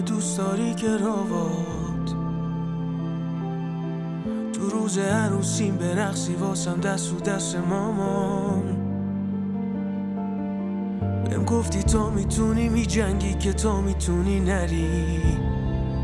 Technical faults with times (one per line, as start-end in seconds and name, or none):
none